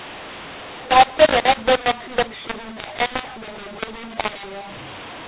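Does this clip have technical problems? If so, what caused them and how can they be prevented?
Yes. Throughout this speech, mu-law and A-law are mixed up: audio coded as A-law is decoded as mu-law, scrambling levels and filling pauses with noise, unlike plain clipping, which leaves silences clean. Prevent it by confirming both ends of the telephone link use the same G.711 law.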